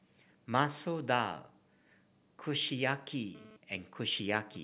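From 3.35 s right through to the end at 4.64 s, a GSM phone buzz cuts in under the speech. A 2G handset close by is bursting out radio pulses about 217 times a second, and the audio circuitry rectifies them, giving a hard, raspy 217 Hz buzz full of harmonics, roughly 20 dB below the speech. Since the phone's moving data, the buzz comes and goes. The whole thing also stops at 4 kHz, which fits a G.711 call path.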